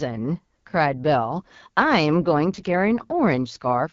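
From start to finish the speech sounds rough and raspy, with a buzzy, grainy edge and a hiss-like top end. This is the AMR wideband (HD Voice) codec running at one of its lowest rates, which fits about 8.85 kbit/s. Too few bits leave the pulse-driven vocal model coarse below 6.4 kHz, while the band above is only filled with shaped noise.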